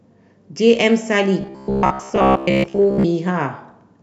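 From 1.41 to 3.06 s, the speech turns into robotic sound from repeated short buffers. The voice becomes a rigid, metallic buzz at 66.8 Hz. Most of that stretch is repeats. Audio likely arrived too seldom, so a segment of about 15 ms looped.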